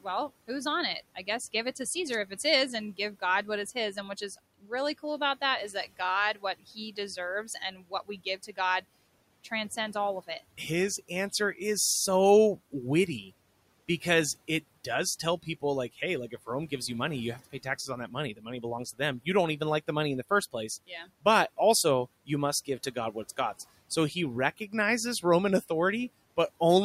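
The noise suppressor cuts speech at 4.62, 6.6, 7.44 to 8.58, 18.36 and 20.87 s, mistaking quiet speech for noise and dropping it by about 12 to 17 dB, so those bits sound swallowed.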